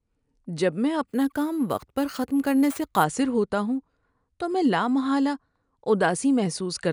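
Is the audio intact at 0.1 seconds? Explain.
Yes, the speech at 0.1 seconds is intact, with no dropout, click, distortion or other fault at that moment.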